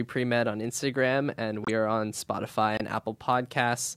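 Corrupt frame decoded at 1.63–1.70 s and 2.75–2.81 s in this speech clip: damaged compressed frames were played anyway, their misread data spraying a fairly loud glitch of misplaced energy over a few frames each time.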